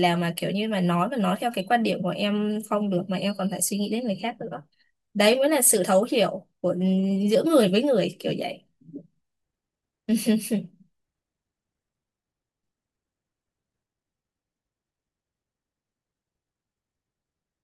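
No technical faults can be heard anywhere in the recording; the speech signal stays steady and continuous throughout.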